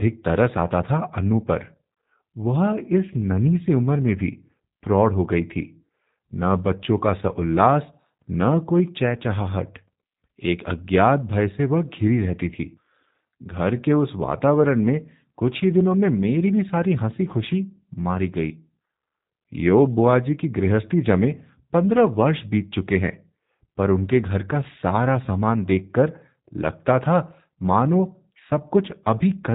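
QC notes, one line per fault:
Throughout, G.729 codec: the speech is rebuilt from a vocal-tract filter and sparse pulse excitation, which fits an 8 kbit/s stream, so it sounds rough and buzzy, with nothing above 3.8 kHz. A plain band-limit would lose only the top; this adds synthetic graininess.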